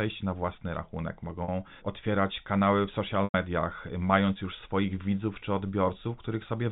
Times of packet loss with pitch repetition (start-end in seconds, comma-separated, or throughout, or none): 1.44-1.48, 3.24-3.34